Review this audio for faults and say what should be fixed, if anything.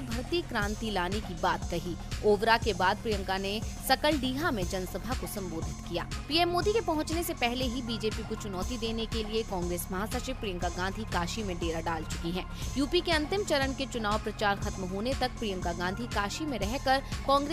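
Nothing here needs fixing.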